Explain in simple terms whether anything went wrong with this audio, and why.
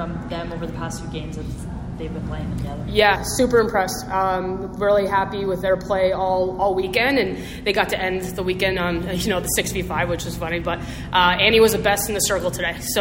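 Between 3.16 and 6.83 seconds the sound turns hollow, then returns to normal. This is channel delay, which causes comb filtering. One channel runs behind the other by roughly a fifth of a millisecond, and when the two are combined into a single channel, parts of the sound cancel at regularly spaced pitches. The first gap sits around 3 kHz, which takes away some brightness and gives that phasey quality.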